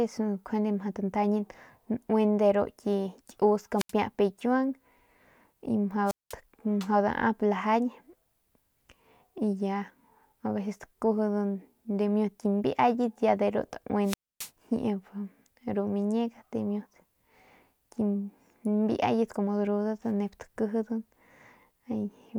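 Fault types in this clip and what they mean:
Wireless microphone squelch dropout: the analogue FM link fades until the receiver's squelch shuts the output, so hiss swells briefly and then the speech cuts to near silence. It happens three times, at 3.77–3.92 s, 6.06–6.34 s and 14.04–14.51 s, with muted gaps of roughly 80, 196 and 267 ms. On a spectrogram each shows as a short band of broadband noise and then an empty vertical gap. The waveform drops to a nearly flat line before the speech resumes.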